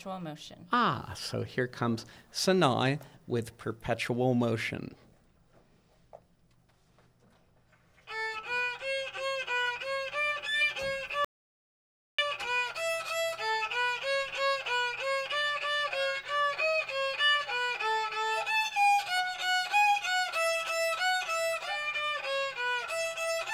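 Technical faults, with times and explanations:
11.25–12.19 s: audio dropout to silence. The sound cuts off mid-flow for about 0.94 s of silence, no room tone. Likely a lost input link.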